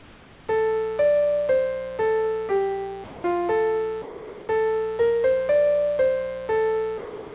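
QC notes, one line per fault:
throughout: mains buzz, a steady raspy 60 Hz buzz with harmonics reaching up toward the call path's 4 kHz limit, sitting roughly 20 dB below the signal.
0.00–0.48 s: comfort noise in place of the background, with the real background giving way to flat, featureless hiss about 4 dB quieter, likely from discontinuous transmission filling the pause.
3.04–3.24 s, 4.02–4.48 s, 6.98–7.34 s: sound dropped by the voice detector, with about 90, 290 and 320 ms of audio lost to steady noise, likely because quiet passages were taken for background.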